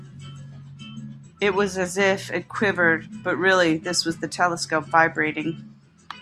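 No technical faults can be heard anywhere in the recording. The speech continues from beginning to end without any audible break or disturbance.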